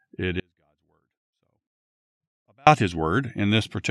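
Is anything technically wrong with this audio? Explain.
Yes. From 0.40 to 2.67 s the speech drops out to a faint residue roughly 40 dB down, likely a live path losing its signal for a while. The waveform collapses abruptly to a thin trace, and the spectrogram shows a near-empty band.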